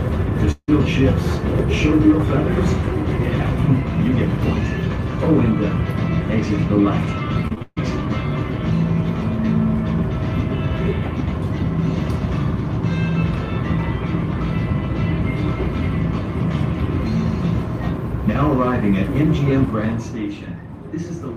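From 0.51 to 0.70 s the sound abruptly turns into a smeared, buzzy continuation of whatever came just before, which fades out and leaves about 50 ms of near-silence before normal audio resumes. Roughly 160 ms of material is simply gone. This is likely a long network dropout, with the receiver covering the hole by extending the last sound. On a spectrogram the fill appears as flat, horizontally stretched bands that thin into a dark strip. The waveform shows a decaying envelope followed by a near-flat line.

Between 7.48 and 7.78 s there is repeated packet loss, which gives a choppy sound with pieces missing. Four separate gaps fall within this short span, the longest about 140 ms, and together they leave about 200 ms of audio missing. Each gap is patched by repeating the preceding sound, so around two thirds of the stretch is concealment rather than real signal. A spectrogram shows several short blocks of smeared, repetitive content with hard edges. 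The waveform shows a stuttering, patchwork envelope.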